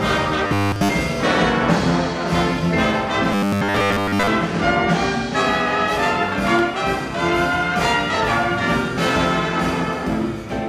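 The audio has two bursts of robotic sound from repeated short buffers. At 0.47 to 0.89 s and 3.33 to 4.28 s, a rigid metallic buzz at 100 Hz is heard, following the original only roughly. That fits a 10 ms chunk likely being looped, fully in the first burst and mostly in the second. At 8.13 to 8.16 s, a corrupt frame decoded produces a brief glitch, as damaged data across a few frames puts energy at wrong frequencies.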